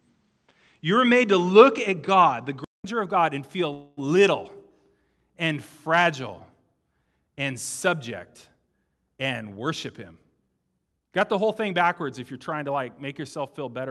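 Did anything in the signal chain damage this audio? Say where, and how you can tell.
Yes. Input switched to a poorer device, 0.0 to 2.84 s: dull speech with nothing above 8.6 kHz, about 5 dB level change, then a 200 ms silence, likely an input-stage device change.

Call audio freeze, 3.73 to 3.99 s, right after "and feel": a fading 238 ms continuation of the last sound fills the gap, and speech resumes intact, pointing to a starved jitter buffer.

Jitter buffer speed-up, 9.17 to 9.58 s at 110% and 10.12 to 11.83 s at 109%: speech hurries at unchanged pitch as the receiver trims pitch periods, dropping roughly 50 ms and 150 ms.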